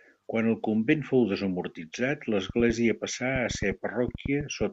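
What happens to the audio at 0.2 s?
Nothing goes wrong at 0.2 s; the speech plays through that moment intact.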